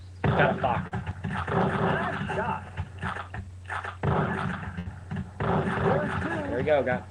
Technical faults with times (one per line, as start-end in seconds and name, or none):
0.87-0.93 short concealed packet loss
4.79-4.87 burst of packet loss